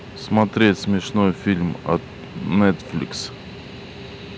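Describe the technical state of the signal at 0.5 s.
At 0.5 s the speech is in hard clipping, from 0.37 to 0.70 s. Peaks exceed the level limit by about 2 dB and are cut flat, adding crackle on loud moments.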